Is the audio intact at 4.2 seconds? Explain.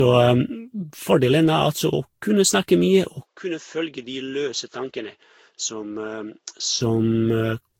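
No. At 4.2 s the clip is inside a stretch that runs from 3.21 to 6.81 s, starting right after "kunne snakke mye", where the sound turns dull and boxy. That's most likely an input switched to a poorer device, a narrower-band mic or a headset call profile. Nothing gets through above about 7.6 kHz, the level falls by about 10 dB, and a faint new noise floor sits roughly 45 dB under the speech. The switch happens with no gap.

On top of that, the whole clip carries generation loss, so 4.2 s has it too. It's swirly, smeared and hollow, with soft, blurred attacks and nothing above 16.6 kHz. The likely cause is repeated lossy re-encoding, something like seven Vorbis passes at about 53 to 56 kbit/s. Each pass quantises again on a shifted frame grid, so the noise and spectral holes pile up beyond what that bitrate alone would give.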